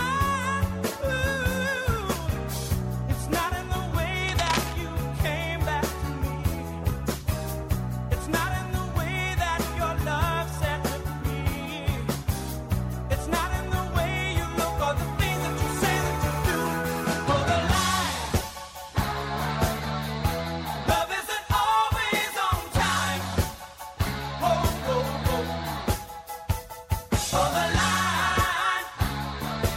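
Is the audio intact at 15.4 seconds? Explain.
Yes, the audio at 15.4 seconds is intact, with no dropout, click, distortion or other fault at that moment.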